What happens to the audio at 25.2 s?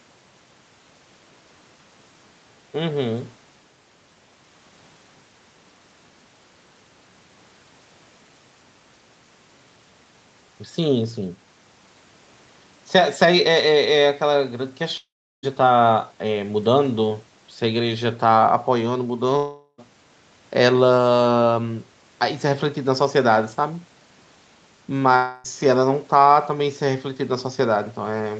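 From 25.16 to 25.46 s the speech drops out for about 0.3 s. The gap is filled with a fading, buzzy continuation of the last sound, likely a long network dropout concealed by the receiver. The speech resumes afterwards with that stretch missing.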